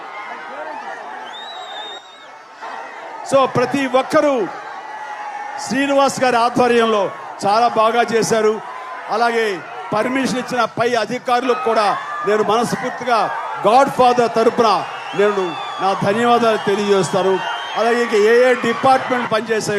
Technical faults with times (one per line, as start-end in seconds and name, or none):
none